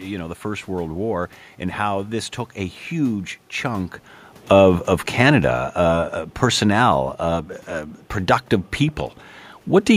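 Speech in which the level sinks gradually from 4.37 to 7.51 s, by about 4 dB, just before "uh productive", with the room noise sinking along with the voice. That is automatic gain falling: the gain control judged the input too loud, or its background noise too strong, and lowered its gain over those three seconds. The earlier level shift around 3.5 s comes from the talker moving relative to the microphone.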